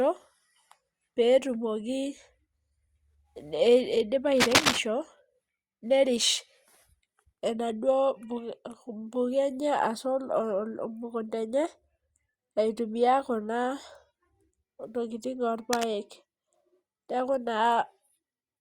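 At 4.36 to 4.79 s a dense, ragged burst of scratching cuts across the speech, louder than the speech itself, and a shorter, quieter rustle sits well beneath it at 15.73 to 15.92 s. This is cable scratch noise, likely from a worn cable or connector being moved so its contact resistance jumps about. On a spectrogram each burst shows as an irregular broadband smear; the waveform shows jagged, uneven spikes riding on the signal.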